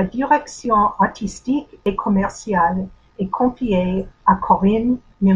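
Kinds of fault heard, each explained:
No technical faults detected in this speech recording.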